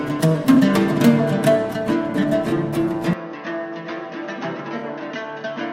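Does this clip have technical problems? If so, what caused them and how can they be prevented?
Yes. Corrupt frames were concealed at 0.54 to 0.58 s, 2.49 to 2.53 s and 4.77 to 4.83 s. The decoder covered the damaged data. The longest hole fits several lost frames. Protect the stream with error checking or retransmission.

From 3.13 s the sound turns duller and quieter, dropping about 10 dB. Nothing passes above 6.4 kHz, and a new noise floor sits about 30 dB down. There is no gap at the change. This likely comes from the input switching to a poorer device. Lock the input device so the system cannot switch it during recording.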